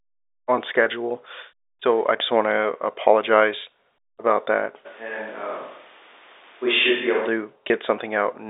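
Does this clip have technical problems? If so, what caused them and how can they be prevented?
Yes. Packet loss with pitch repetition at 0.84 s and 7.68 s: about 20 ms, consistent with a single lost packet, was filled by repeating the last pitch period, giving a brief buzzy hold. On a spectrogram it shows as a short run of frozen, evenly spaced harmonics. A jitter buffer and forward error correction on the network path would prevent it.

A switch to a distant microphone from 4.87 s to 7.26 s makes the sound abruptly hollow and roomy, about 5 dB quieter, with room noise about 25 dB below the speech. The likely cause is the close microphone dropping out. The waveform shows a sudden step down in level, and the spectrogram shows thinner bass and a raised noise floor between phrases. Securing the close microphone's connection and monitoring its input during recording would prevent it.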